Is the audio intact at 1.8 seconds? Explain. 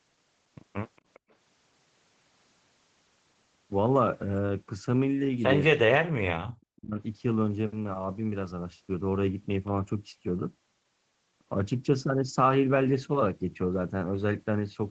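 Yes, the speech at 1.8 seconds is intact, with only the ordinary effect of the call path, whose Opus coding at 20 kbps limits the sound to nothing above 8 kHz.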